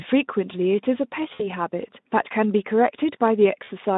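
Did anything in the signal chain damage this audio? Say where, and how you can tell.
Yes. In the network stage, the sound smears into a fading buzz at 1.33–1.48 s and 3.63–3.70 s. This is VoIP packet loss concealed by the narrowband speech codec, which extrapolates across roughly 60 ms and 40 ms gaps.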